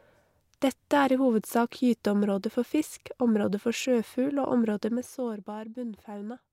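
Zipper noise from 4.68 to 5.63 s: the level drops about ten decibels in unsmoothed 1 dB steps, some fifteen per second, each clicking audibly.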